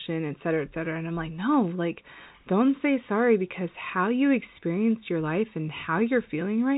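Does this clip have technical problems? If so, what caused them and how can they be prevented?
No, the speech carries no technical faults, and the band ending near 3.8 kHz fits normal G.711 A-law telephone coding at 64 kbps.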